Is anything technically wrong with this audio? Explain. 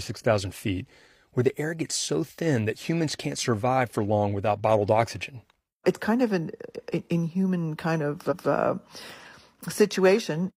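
Yes. Right after "an inhuman kind of", at 8.27 to 8.46 s, repeated frames replay a block of about 0.19 s once, which fits a run of around four compressed frames sent twice. Unlike an echo, the repeat is an exact, undecayed copy, heard as a stutter, lengthening the clip by 186 ms.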